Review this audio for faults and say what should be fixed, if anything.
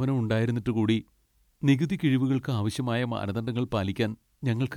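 Nothing needs fixing here: the speech signal shows no technical faults at any point, so no correction or preventive change is called for.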